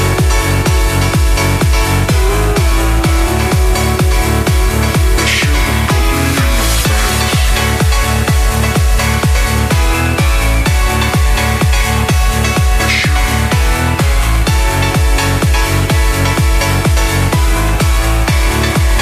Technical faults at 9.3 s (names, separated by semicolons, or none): none